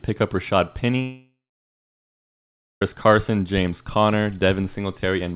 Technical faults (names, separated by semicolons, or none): long network dropout